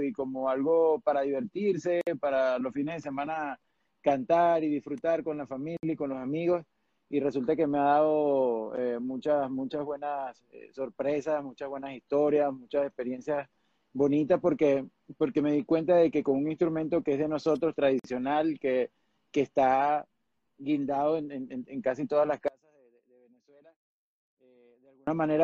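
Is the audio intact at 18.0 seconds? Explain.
No. A 50 ms silence breaks the sound at 17.99–18.04 s before it resumes: a gap at a join of encoded pieces, left by untrimmed encoder padding.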